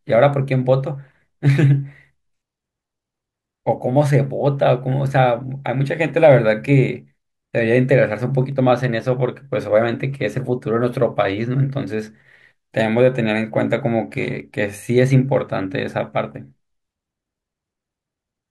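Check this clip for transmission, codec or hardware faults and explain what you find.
Three sharp, isolated clicks cut through the speech at 8.52 s, 12.80 s and 14.40 s. Each is a brief snap, seen as a thin vertical line across the spectrum. The likely cause is dropped samples: a fraction of a millisecond of the stream goes missing, so the waveform jumps abruptly to a later value. That loss is far too short to remove any sound, but the jump itself produces the click.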